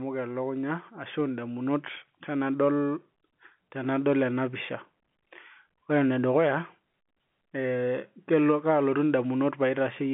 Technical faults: none

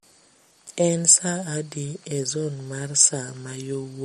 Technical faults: MP3 compression

